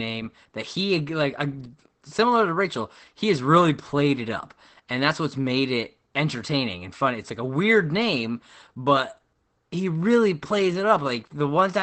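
Opus voice compression runs throughout the speech: the narrowed wideband SILK coding leaves nothing above 8.5 kHz and sounds muffled, hoarse and faintly robotic, consistent with roughly 12 kbps.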